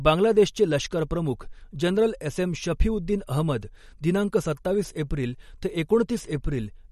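Throughout the speech, the likely cause is MP3 compression run short of bits, which fits a bitrate around 48 kbps. The encoder cut everything above 12.5 kHz and dropped weak frequency lines frame by frame, leaving a dulled top and plainly audible watery, swirling artefacts.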